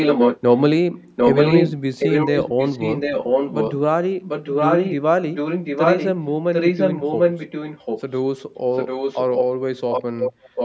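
A second, delayed copy of the speech trails the main speech by about 0.75 s in eight stretches: 0.0–0.61, 1.16–1.72, 1.98–3.78, 4.21–4.95, 5.34–6.12, 6.53–8.17, 8.73–9.44 and 9.91 s to the end. At first the copy is a little louder than the original. Through the middle it matches it, and in the last two stretches it sinks somewhat below. This is echo leak, likely from a far-end loudspeaker whose sound the echo canceller failed to remove before sending it back.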